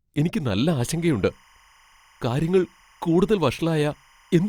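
From 0.80 s to the end of the speech, at 4.49 s, timecode bleed sits behind the audio: linear timecode from an adjacent track or cable has leaked into the signal path. Its square wave flips between roughly 1 kHz and 2 kHz, heard as a faint chirping warble well below the speech, around 35 dB down. The pattern fits 25-frame code. Unlike a steady test tone or mains hum, it never holds one pitch but keeps toggling in a rapid, data-like rhythm.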